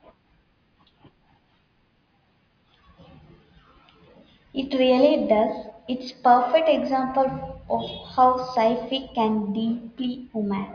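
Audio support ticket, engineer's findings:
No faults found in this audio on review.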